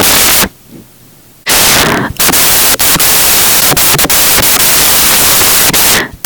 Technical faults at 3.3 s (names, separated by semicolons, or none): samples built from the wrong bytes